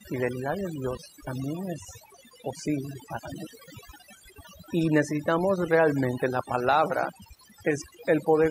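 Throughout the speech, the background falls to near silence speckled with twinkling chirps. That is overdone noise removal: the reduction was set so hard that bands near the noise estimate were cut away along with quieter parts of the voice.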